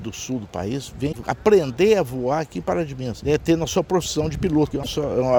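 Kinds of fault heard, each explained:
Damaged data in a compressed stream: Some bytes in the encoded audio were lost or corrupted. The decoder misreads those frames and must hunt for the next valid frame header before playback recovers. Here it happens twice, as short blips of about 70 ms each. The first runs from 1.09 to 1.16 s. The second runs from 4.80 to 4.87 s.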